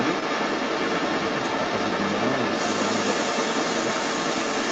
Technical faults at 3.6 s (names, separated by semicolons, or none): other side's voice leaking through